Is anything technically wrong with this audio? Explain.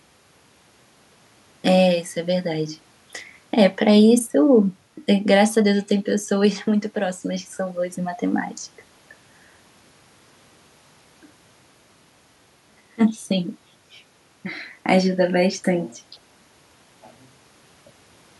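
No, nothing technically wrong here.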